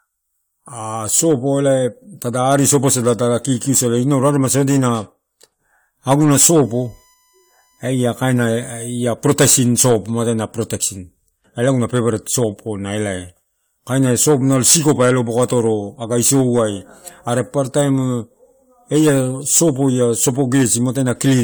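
From 6.34 to 8.84 s a USB whine sits under the speech: a steady tone of fixed pitch at 1 kHz, roughly 40 dB below the speech. Current drawn in the bus's 1 ms frames leaks through the power or ground into the audio path, so the whine tracks the frame rate. Its 1 kHz pitch, rather than the 50 or 60 Hz buzz of mains hum, points to the USB frame timing as the source.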